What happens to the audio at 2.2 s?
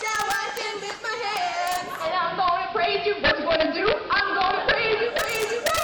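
At 2.2 s the sound is in a digital radio blending to analogue section, running from 1.88 s to 5.34 s. The receiver cross-fades over 295 ms to the AM broadcast, the level shifts by about 3 dB, and hiss sits roughly 20 dB below the signal. Integer overflow is also present here and throughout. Peaks driven about 3 dB past full scale wrap to the opposite sign instead of limiting, producing sharp cracks on a small fraction of loud samples.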